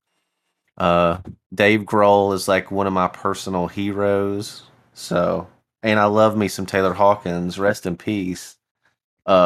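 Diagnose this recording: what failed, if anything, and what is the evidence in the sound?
Nothing in the recording stood out on listening as having gone wrong at any stage of the chain.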